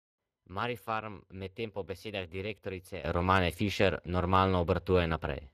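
Throughout the speech, Speex codec damage is plainly audible: the voice has a hoarse, noisy edge, and the upper band sounds like shaped hiss rather than detail. This fits a bitrate near 22 kbps. A spectrogram shows smeared, grainy harmonics and nothing above 15.4 kHz.

At 3.04 s a sudden gain jump lifts the level by about 12 dB and holds to the end. Voice and background noise rise together in a single step, likely from a gain setting applied with no ramp. The waveform envelope widens abruptly at that sample.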